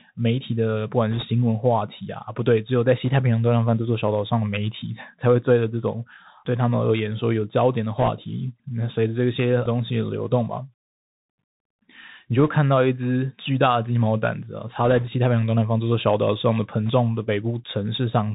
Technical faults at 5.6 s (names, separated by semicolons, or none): Bluetooth CVSD headset codec